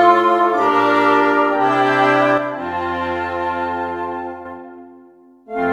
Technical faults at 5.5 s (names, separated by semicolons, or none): none